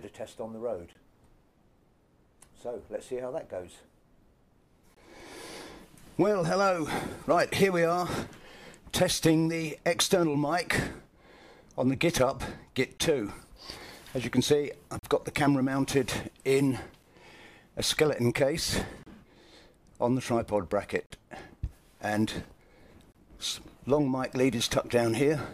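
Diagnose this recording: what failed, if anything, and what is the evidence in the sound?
Gaps between stream segments, at the playback stage: hard-edged silent holes of about 9 to 42 ms at 0.93, 4.94, 12.98, 14.99, 17.03, 19.03, 21.06 and 23.12 s, on a 2-second grid. Mismatched segment timestamps leave small gaps that the player fills with silence. No audio is lost.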